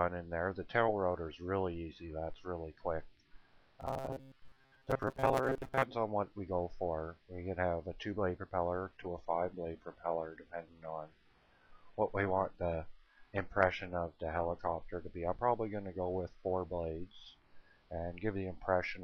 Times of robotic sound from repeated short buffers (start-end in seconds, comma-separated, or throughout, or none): 3.81-5.84